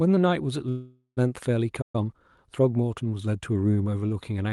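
A short speech clip carried over a call path, with its spectrum topping out near 12 kHz, consistent with Opus band-limiting. It shows three timing faults. A call audio freeze runs from 0.69 to 1.19 s. The last sound is stretched into a fading buzz for about half a second, including roughly 110 ms of near-silence, and then the speech resumes where it left off with nothing lost. The likely cause is delayed packets draining the jitter buffer. On a spectrogram this looks like a smeared, decaying horizontal band, and the waveform shows a tapering envelope. A playback stall follows from 1.81 to 1.95 s, cutting the sound dead for about 120 ms. This likely comes from the player running short of data, and it appears as a flat gap in the waveform and a blank vertical strip on the spectrogram. Time-compressed catch-up then runs from 1.95 to 2.43 s. The speech is hurried to 1.25 times normal speed at unchanged pitch, by splicing out and cross-fading small fragments. 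Syllables look compressed horizontally on the spectrogram while harmonic spacing stays the same.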